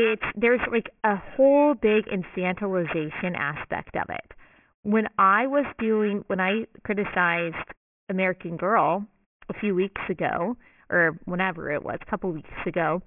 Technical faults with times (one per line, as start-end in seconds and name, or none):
0.00-13.06 aliasing